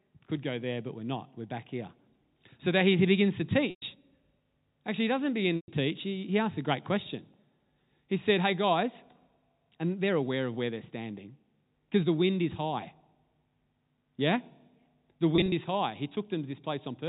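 At 3.70 to 3.82 s, just after "that he begins to", and again at 5.56 to 5.68 s, after "he doesn't", about 120 ms of audio is lost. This is packet loss with pitch repetition: the receiver repeats the last pitch period and fades it out, so each gap fades into silence before the speech returns with a short cross-fade.

On a spectrogram, the harmonics freeze into flat, evenly spaced lines. On the waveform, a single cycle repeats as it decays.

From 15.36 to 15.52 s, before "is high", 80 ms of losses are scattered in runs of no more than 20 ms, heard as slightly held, buzzy notes. The spectrogram stops at 4 kHz throughout, from the telephone coding.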